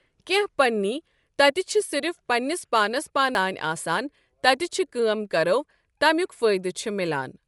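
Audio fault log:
throughout: Bluetooth LC3 compression. The sound has a grainy, breathy edge, and nothing is present above 11.5 kHz. The likely cause is LC3 coding at a low bitrate, around 48 kbps with 10 ms frames. The codec discards upper detail and fills the gaps with noise.
3.35 s: CD skip. Right after "پنٛنس پانس" there is a tick and a very brief mute of a few milliseconds. Playback then resumes from a different place, as when the laser jumps to another turn of the disc's spiral.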